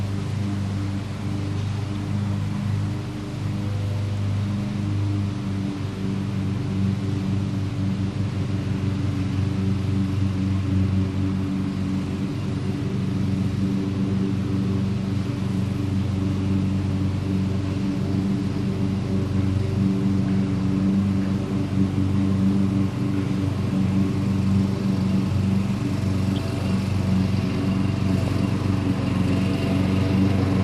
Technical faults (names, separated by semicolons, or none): MP2 compression; DAB burbling